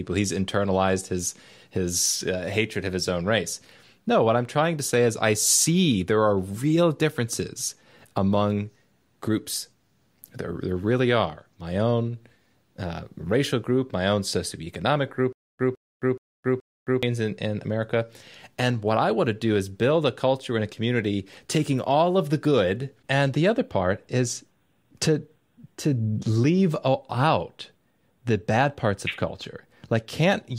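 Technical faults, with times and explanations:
15.33–17.03 s, stutter with silent gaps: a 158 ms burst repeats four times every 425 ms with 267 ms of dead silence between, likely a stalled stream, unlike smooth looping.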